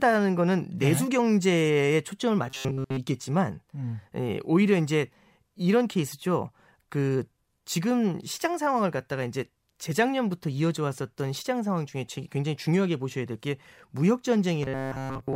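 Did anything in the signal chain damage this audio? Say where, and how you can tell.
Yes, robotic sound from repeated short buffers hits at 2.48 to 2.99 s and again from 14.63 s to the end. A stiff metallic buzz at 133 Hz sits on the speech, which fits a starved buffer stage likely looping a 7.5 ms chunk over most of the real audio.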